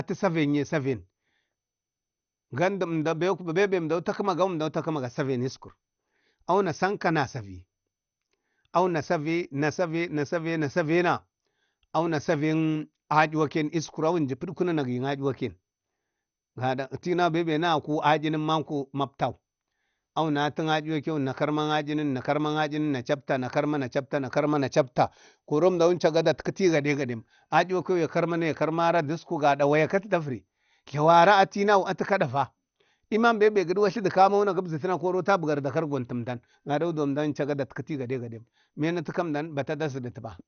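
From start to finish the speech sounds dull and muffled, with nothing above about 6.5 kHz, and a gurgling, granular roughness runs through it. This is likely MP2 compression, the MPEG Layer II codec, starved of bits. It divides the spectrum into 32 sub-bands and, short of data, drops the upper ones entirely while quantising the rest coarsely. The damage is plainly audible, which fits a low bitrate of around 48 kbps.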